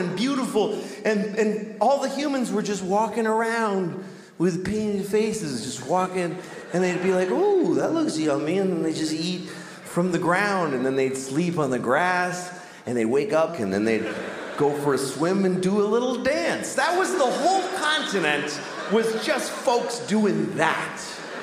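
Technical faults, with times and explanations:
No technical faults can be heard in this audio.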